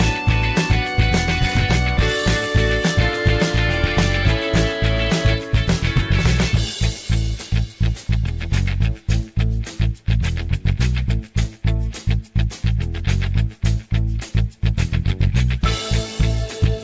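No faults to report; the call path is band-limited with nothing above 8 kHz, consistent with a wideband codec such as G.722 running at 64 kbps.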